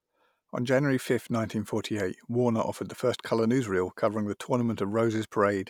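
Speech recording with nothing technically wrong audible at any point in the clip.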